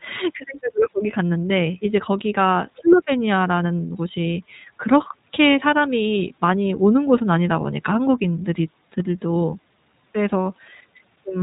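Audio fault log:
Throughout, iLBC codec: narrowband band-limiting removes everything above 4 kHz, and independently coded frames, consistent with 20 ms, make the speech plainly rough and synthetic.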